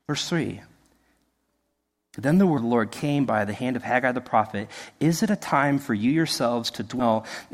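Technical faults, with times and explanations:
2.57 s and 6.99–7.02 s, compressed frames skipped: the speech lurches forward with a soft, smeared blip rather than a sharp click, once just before "of the" and again near the end. Whole frames of the coded stream were never played, either missing or rejected by the decoder as damaged, so the audio jumps ahead. The first gap loses about four frames, roughly 70 ms, and the second about seven, near a tenth of a second, with 20 ms frames. Overlap between neighbouring frames blurs each join.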